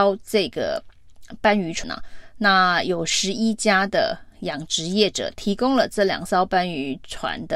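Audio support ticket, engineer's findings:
Compressed frames skipped at 1.84 s. Speech jumps ahead with no gap of silence; roughly a fifth of a second of audio never plays. Probable component: the decoder or the file. Mechanism: whole compressed frames missing or rejected as damaged, so playback resumes later.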